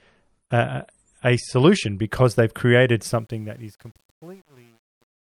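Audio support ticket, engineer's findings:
Adaptive stream starting at a low bitrate, 0 to 2.0 s. Player opened on a low-quality rendition before measuring the connection; sound points to roughly a 48 kbit/s MP3 tier. Nothing above 11.1 kHz, dull top end, heavier codec smear. Clean step up at 2.0 s to a fuller, brighter rendition, consistent with about 128 kbit/s, with no gap.

Truncation distortion on a fade, 3.08 to 5.37 s. Fade/gain stage keeping too few bits with no dither; grit fits about 9-bit resolution. Fade-out itself (from about 3 s to 5.37 s): as level drops the waveform collapses into coarse steps. Gritty tail, worst 3.59 to 5.37 s.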